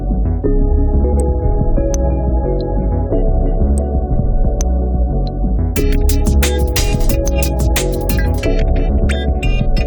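Brief garbled flutters interrupt the audio at 1.04, 4.15 and 8.89 s, each lasting about 0.18 s: frames out of order, two 85 ms blocks swapped in playback.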